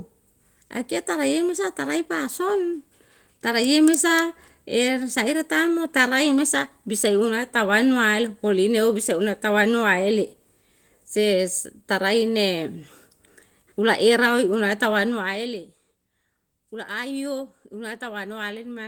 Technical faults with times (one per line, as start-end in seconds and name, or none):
none